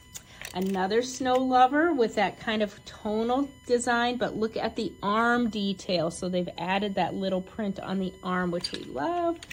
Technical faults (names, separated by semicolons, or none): USB whine